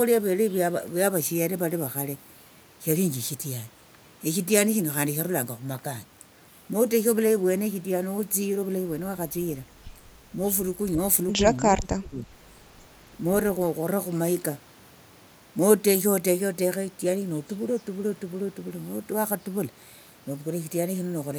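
From 11.7 to 12.27 s the speech sinks sharply, falling by around 25 dB at its deepest, with roughly half a second of the passage affected. This is likely speech suppressed in double talk: with both ends talking at once, the echo canceller could not tell this talker from loudspeaker echo and turned everything down. A packet dropout would leave abrupt gaps of silence. Here the level collapses and recovers in step with the overlap.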